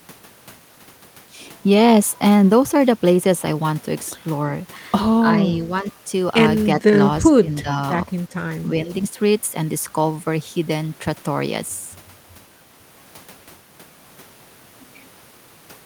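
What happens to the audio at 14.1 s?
Nothing goes wrong at 14.1 s; the speech carries on intact through that moment, with no dropout, click or distortion.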